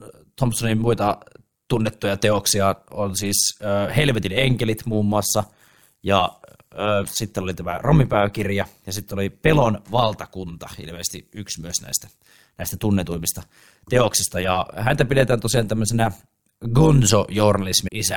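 A metallic buzz runs through the whole of this speech recording, a ripple that pulses around 100 times a second and swings the level by about 11 dB. This is overlap-add ripple: the audio was split into windowed frames and rejoined with overlaps that don't add up to a steady gain, so loudness dips and recovers once per frame. Near the very end, at 17.87 s, a brief glitch cuts in. This is damaged data in the compressed stream: corrupted bytes made the decoder misread that frame, lose sync and search for the next frame header.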